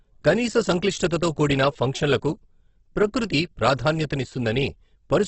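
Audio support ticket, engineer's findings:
Speech, throughout: grainy, rough, noisy texture, nothing above about 8.2 kHz. Likely Opus compression at a low bitrate, around 12 kbps, music (CELT) mode. Bands kept by energy but filled with folded or noise content, hence graininess rather than holes.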